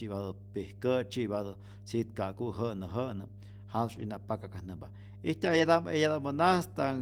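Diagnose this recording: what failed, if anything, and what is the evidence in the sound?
A steady 50 Hz tone runs beneath the speech throughout, roughly 15 dB down. This is mains hum from the analogue wiring, where a ground loop or transformer couples in the supply.

Short rough, noisier patches occur at 3.95–4.01 s and 5.45–5.59 s without any gap. These are network losses, each lost packet rebuilt from error correction using a low-bitrate copy.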